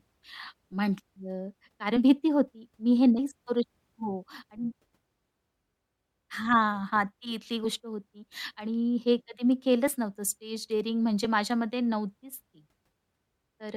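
Compressed frames skipped at 1.96–1.99, 3.18, 7.64, 9.87–9.91 and 11.24 s: whole 10 ms frames go undecoded, so the speech leaps ahead by roughly 70, 40, 70, 30 and 10 ms. Unlike a dropout, no silent gap appears. The audio just jumps at each join.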